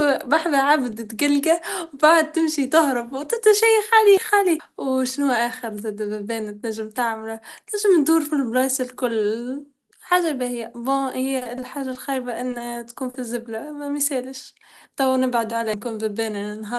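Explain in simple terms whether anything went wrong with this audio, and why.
At 4.17 s and again at 15.74 s the sound jumps forward abruptly, as if roughly a third of a second has been snipped out and the two ends joined with no pause. This is audio missing between chunks, likely from a recorder working in pieces and dropping audio at each handover.

From 11.37 to 11.97 s the sound turns choppy. This is repeated packet loss: five small pieces of the call arrived too late or not at all, and the receiver kept patching each hole by stretching the sound just before it.

Two briefer hiccups follow, a quick smear from 12.58 to 12.62 s and a slightly longer wobble from 13.10 to 13.22 s. Each is a short concealed packet loss, where one brief piece of the call went missing and was filled in by continuing the sound before it.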